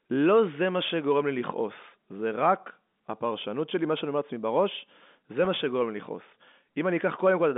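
A brief buzzy, held quality at about 5.45 s interrupts this telephone-band speech recording, carried over G.711 coding with its 200 Hz to 3.6 kHz line band. That is packet loss with pitch repetition. About 10 ms of audio went missing, which fits a single lost packet, and the receiver filled the hole by repeating the most recent pitch cycle. The loss is short, so the repeated cycle never fades toward silence and only sounds like a momentary frozen tone before normal audio resumes.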